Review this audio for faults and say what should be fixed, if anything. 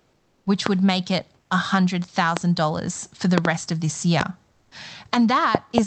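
Comfort noise in place of the background at 0.00–0.45 s, 1.41–1.49 s and 4.51–4.71 s. The real room background gives way to a smooth, featureless hiss about 2 to 3 dB quieter, likely synthesised by the receiver during Opus discontinuous transmission. Unlike a dropout, the gap never falls silent. Disabling DTX on the sender, or raising its voice-activity threshold sensitivity, would prevent it.

Loud pops at 0.66–0.69 s, 2.37–2.39 s, 4.21–4.23 s, and as doubled pops at 3.38–3.47 s and 5.55–5.80 s. Each is a sharp transient roughly 20 dB above the sound, likely a voltage step from a connector, switch or driver glitch. The sound carries on underneath, unlike a dropout or clipping. Securing cables and connectors and checking the audio driver would prevent them.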